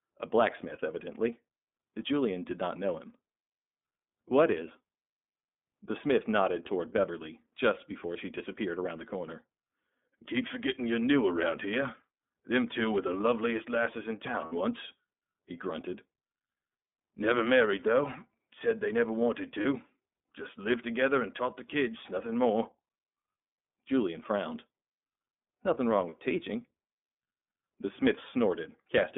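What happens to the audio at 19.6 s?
Right after "they never wanted", from 19.61 to 19.66 s, there is a brief stretch of lost iLBC frames. The gap lasts about 30 ms, which fits a single missing iLBC frame. The decoder fills it by repeating the last pitch cycle blended with noise, so it sounds like a short held, faintly buzzy vowel rather than silence or a click. Unlike concealment in codecs whose frames depend on earlier ones, the voice comes back right almost immediately, with no lingering smear. The repair also stays within the narrowband iLBC sound, limited to roughly 200 Hz to 3.6 kHz.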